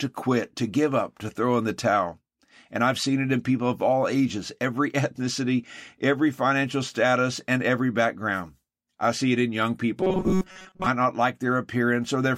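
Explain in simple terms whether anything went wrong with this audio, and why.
Near the end, from 10.01 to 10.87 s, the speech turns into a flat, metallic buzz. This is robotic sound from repeated short buffers. The likely cause is that new audio arrived too slowly. The playback filled the gaps by looping the last tiny slice of sound, over and over, for most of that stretch. The loops add a buzz at 188 Hz. That fits a slice about 5 ms long.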